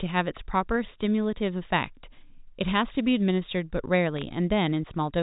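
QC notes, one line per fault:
4.17–4.22 s, bit errors on a digital phone line: flipped sample bits cause brief sharp ticks, seen as single-sample waveform spikes and thin vertical spectrogram streaks up to 4 kHz.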